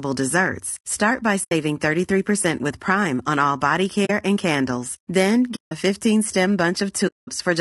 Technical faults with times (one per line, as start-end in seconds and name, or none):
0.00-7.61 low-delay AAC compression
1.43-1.52 AAC frame loss with muting
4.05-4.10 AAC frame loss with muting
5.55-5.72 AAC frame loss with muting
7.07-7.29 AAC frame loss with muting